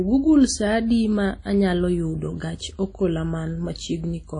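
Throughout the speech, a low-bitrate transform codec, likely WMA compression, has quantised the signal coarsely, consistent with roughly 32 kbps. Nothing remains above 10.1 kHz, and the plainly audible damage gives the voice a ringing, washy smear with hiss that swells and fades alongside it.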